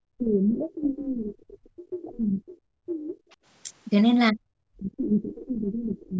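From 0 to 2.58 s, 2.75 to 3.18 s and 4.32 s to the end, the speech sinks by as much as 35 to 40 dB in uneven chunks, unlike a steady dropout. This is likely speech suppressed in double talk, with the echo canceller ducking the talker. At 3.31 to 3.35 s, a faint scrap of a second voice, about 40 dB below the speech, is likely the other side's voice leaking through.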